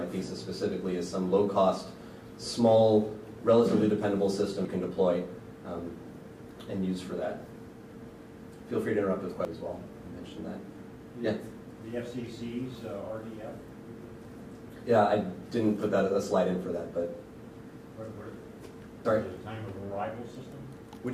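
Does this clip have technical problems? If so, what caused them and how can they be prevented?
Yes. There are four abrupt skips at 4.65, 9.45, 14.25 and 19.05 s, each dropping roughly a fifth of a second with the two sides butted together. That regular spacing points to audio missing between chunks, likely from a recorder working in 5-second blocks. Keeping capture continuous, or overlapping the chunks, should prevent it.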